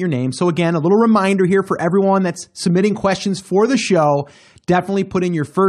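No technical faults occur at any point in the recording, so there is nothing to describe in time order.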